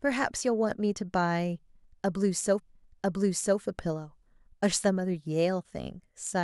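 Speech with a stream segment repeated: from 2.58 s to 3.58 s, roughly one second plays a second time, with a small blip at the jump back, because the player queued the same segment twice. A short buffer stutter would instead loop a few milliseconds.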